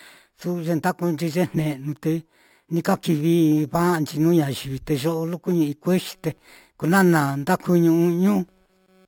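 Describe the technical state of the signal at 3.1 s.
At 3.1 s, as throughout, the speech shows imaging from sample-and-hold upsampling. Repeated samples, which fits a 12 kHz source raised to 48 kHz, leave a mirrored spectrum copy about 22 dB down at 6 to 12 kHz. It is heard as metallic fizz, seen as inverted harmonics on a spectrogram and stair-stepped waveform.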